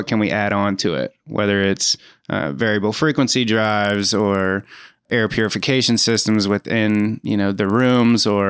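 From 3.55 s to the end, the speech carries a steady ticking at 20 per second, heard only while sound is present. This comes from a resampler restarted on every block: each 50 ms block was converted from 24 kHz to 16 kHz separately, leaving a small error at every block edge.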